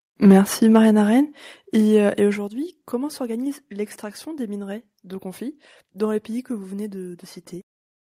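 From 0.26 to 0.39 s the speech takes on a harsh, crackling edge, which points to microphone overload as the likely cause. The input level is driven about 5 dB beyond what the converter can represent, so the waveform tops are sheared flat, with something like a tenth of the samples in that stretch pinned at the converter's limit. The flattened peaks add a gritty distortion to the loudest syllable.

At 1.32 s the whole signal, voice and background together, drops abruptly by about 4 dB, and at 2.34 s, between "euh et" and "comment s'organise l'extraction des", it drops again by about 3 dB. Each change happens in one step, not as a gradual fade. Coming soon after the overloaded peak, this pattern suggests the microphone volume was likely stepped down by the call software in response to the clipping.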